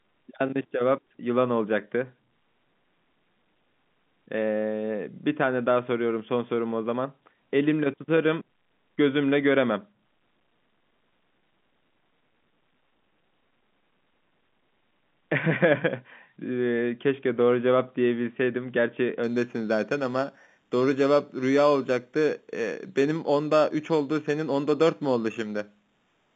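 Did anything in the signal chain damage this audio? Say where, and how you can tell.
Yes, at the converter: periodic clock jitter runs from 19.2 s to the end at 26.4 s. Interference near 4 kHz modulates the sampling clock, adding sidebands around each speech component, strongest on the upper telephone band, which gives a rough, metallic edge that drops out in pauses.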